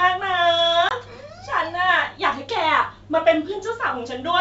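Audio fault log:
0.89–0.92 s, packet loss on an ADPCM call: a hard-edged silent gap, consistent with a couple of lost packets, after which the decoder's predictor and step size no longer match the sender's.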